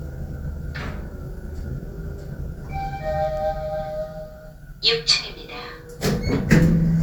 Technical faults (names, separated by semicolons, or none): none